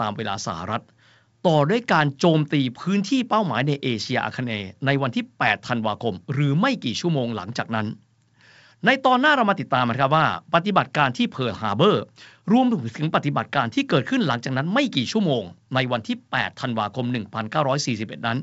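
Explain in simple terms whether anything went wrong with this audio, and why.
Nothing went wrong here: this is speech sent over G.722 wideband telephone coding, which keeps it sounding clear up to about 7 kHz, just as that kind of phone line is meant to.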